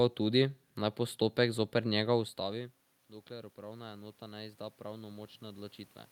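A speech clip in which, after "naj postopek zoper njega", automatic gain rising lifts the level by about 7 dB between 2.39 and 5.82 s. The talker moving away around 2 s drops the voice about 20 dB, but there the room noise stays put, whereas here it swells with the voice.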